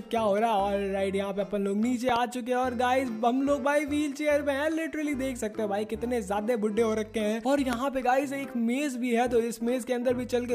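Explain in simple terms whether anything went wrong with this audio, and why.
Loud pops occur: a quick double pop at 2.09–2.18 s and a single, louder one at 7.73–7.75 s, likely electrical. Unlike a dropout, the sound continues underneath.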